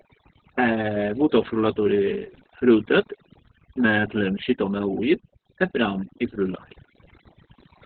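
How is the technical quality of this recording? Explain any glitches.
The technical quality is poor. Two faults run through the whole speech clip, one layered on the other.

Overdone noise removal affects the entire recording. The reduction was set so strong that individual frequency bands are pulled down or shut off whenever they sit near the estimated noise floor, taking the quieter parts of the voice with them. The background drops and breaks up into twinkling, warbling specks. Unlike a simple gate, which cuts the whole signal at once, this flickers band by band, which produces the sparkle.

Opus voice compression is also present throughout, and heavily damaged. Nothing is left above about 4.5 kHz, so the sound is narrowband and boxy. The muffled, hoarse, slightly robotic quality points to the SILK linear-prediction coder running at a very low rate, around 8 kbps, where the excitation is coded coarsely. 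A plain low-pass filter would dull the sound without that buzzy, synthetic roughness, and MP3-style damage would swirl and smear instead.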